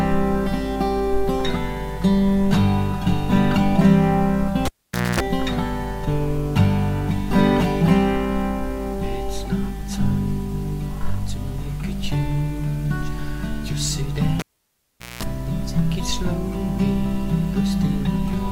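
The audio has a cable pulled and plugged in twice, at 4.65 to 5.20 s and at 14.39 to 15.23 s. Each event opens with a pop as the live connection breaks, then drops to near silence for about 500 ms and 790 ms respectively. Bursts of 60 Hz mains buzz lasting about 245 ms and 205 ms follow as the plug's tip alone makes contact and the input is left ungrounded. A second pop marks full reconnection and the return of the signal.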